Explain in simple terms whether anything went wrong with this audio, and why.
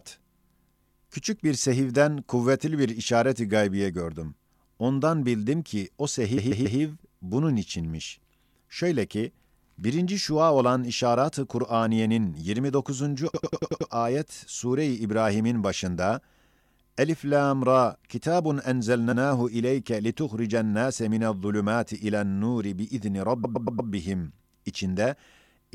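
The speech stutters from repeated frames. The same compressed chunk got played again at 6.36 s after "bildim ki o", at 13.33 s, at 19.11 s after "lam ra kitabun", and at 23.43 s.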